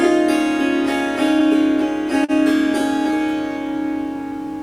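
From start to finish there is clock drift between sender and receiver: the sender's clock runs roughly 2 percent slow, so the receiver's buffer keeps draining and it repeats short slices to cover. This causes small, unevenly spaced timing hiccups, seen as tiny duplicated segments in the waveform and faint vertical seams on a spectrogram.

At 2.24 s a short stall from a late packet occurs: the buffer ran empty, and the receiver held the last sound for about 41 ms until 2.31 s, then resumed with nothing lost but everything after it 41 ms later. It sounds like a brief frozen smear with a slight buzz or dip; a spectrogram shows flat horizontal streaks and the waveform a repeating pattern.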